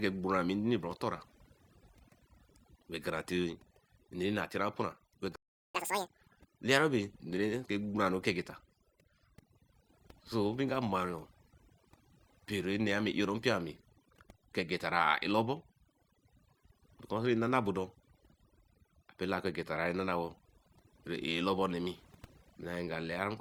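Right from the start and for the whole clip, there's overdone noise removal. The denoiser has been pushed so hard that it's gating individual frequency bands whenever they sit near its idea of the noise floor. The background drops to an unnatural near-silence dotted with little twinkling, chirpy specks, and the softer parts of the speech get caught in the same net.

At 5.36 s the audio simply cuts out and stays silent until 5.75 s, a gap of about 0.39 s. That's a playback stall. The sound stops dead mid-flow rather than fading, which points to the player likely running dry of data or having its thread held up, so nothing reached the output until it recovered and picked up again.

Straight after, from 5.75 s to 6.14 s, you get the catch-up at higher speed. The player rushes through its backlog at double speed by resampling, so for that short stretch everything runs fast and the pitch jumps up by roughly ten semitones, giving a brief chipmunk-like squeak. 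It's winning back exactly the time lost in the stall, then it drops back to normal speed and pitch.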